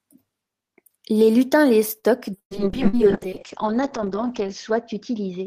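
A short speech recording shows three kinds of network fault. Just after "lutins les", at 1.99 to 2.06 s, there is a short stall from a late packet. The jitter buffer ran dry, so the receiver stretched the last sound for about 37 ms and then carried on from the same point. Nothing is lost, but the playout delay grows by 37 ms. A spectrogram shows the preceding frequency pattern smeared flat and repeated for that short stretch. From 2.38 s to the end there is a call bitrate drop. The encoder falls from 32 to 7 kbps, held at its lowest for about 1.9 s, and coarser coding turns the sound rough and watery. Its bandwidth narrows from 20 kHz to 8 kHz, so a spectrogram loses all energy above 8 kHz in a sharp horizontal ceiling. Within that stretch come two bursts of packet loss. At 2.39 to 2.54 s about 120 ms of audio is gone: the receiver extends the last sound and fades it, then drops to silence for roughly 90 ms. 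On the waveform this looks like a decaying tail followed by a flat gap, and speech resumes further on. At 2.88 to 2.96 s a shorter burst removes about 60 ms, and a brief smeared, fading fill covers it.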